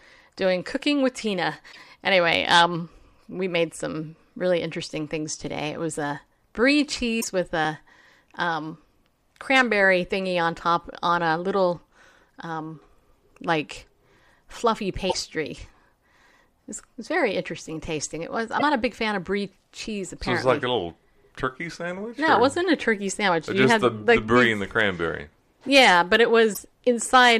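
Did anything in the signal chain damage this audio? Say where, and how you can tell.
Yes. Damaged data in the compressed stream at the codec or storage stage gives brief glitches at 1.69, 7.20 (after "was a brie"), 15.06, 18.59 and 26.50 s, where the decoder lost sync and resynchronised.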